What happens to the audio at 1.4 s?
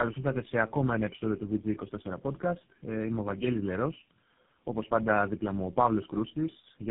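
At 1.4 s the speech carries tandem speech coding, present across the whole clip rather than starting there. The sound suggests about four low-rate speech codecs in a row, likely AMR and GSM full rate links, each decoding and re-coding the last one's already damaged output. The errors stack, so the speech is rough, muffled and warbly, with nothing above 3.7 kHz. A single narrowband codec would cut the same band but sound far cleaner.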